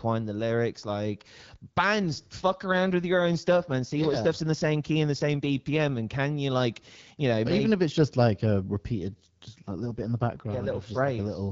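From 2.39 to 5.98 s, ending just before "and can you like", and again from 9.11 to 11.08 s, just after "it's just like a", an AMR rate drop shifts bits to error protection, consistent with 12.65 falling to 8.85 kbit/s. The band stays intact without gaps, but the speech grows rougher and more synthetic.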